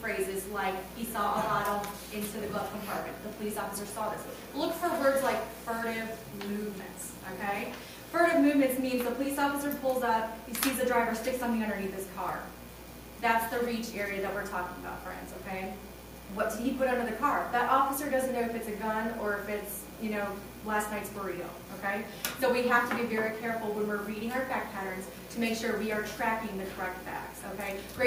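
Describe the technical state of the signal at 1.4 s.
No fault is present at 1.4 s, and the signal is intact at that point.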